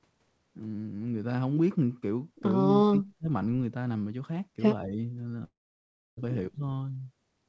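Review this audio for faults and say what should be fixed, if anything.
Speech suppressed in double talk at 2.88 to 3.28 s, 4.85 to 4.98 s and 6.54 s: the voice drops sharply, by about 35 dB in the first and about 10 to 15 dB in the shorter two. This is likely an echo canceller mistaking the talker for loudspeaker echo while the far side speaks, and attenuating both.

Long network dropout from 5.44 to 6.19 s: the last sound smears into a short fading buzz, then about 0.65 s of silence follows. The audio resumes at 6.19 s with roughly three quarters of a second missing, likely because packets stopped arriving and the receiver could only conceal the gap.

To prevent these, tune the echo canceller's double-talk detection so near-end speech is not treated as echo, and improve the network's reliability or add redundancy so that losses this long don't occur.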